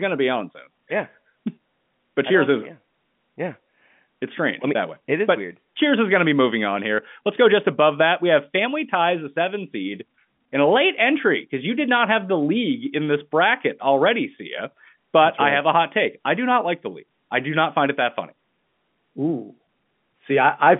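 Nothing goes wrong anywhere in the recording, and the ordinary telephone-line sound, with its narrow band topping out around 3.5 kHz, is just what a landline carrying speech normally gives you.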